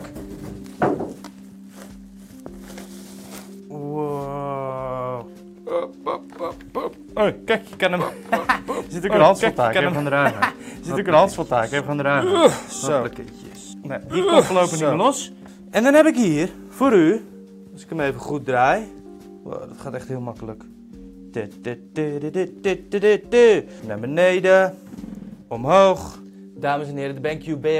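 From 7.98 s to 15.14 s the audio carries a doubled audio track: a second, full-band copy trails about two seconds behind at roughly equal level, likely from a slower capture path. Unlike echo, it has no decay or room colour and starts and stops abruptly.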